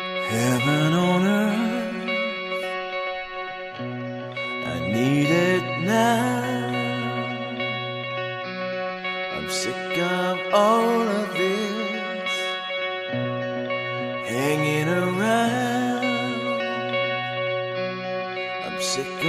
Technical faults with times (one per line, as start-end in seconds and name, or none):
none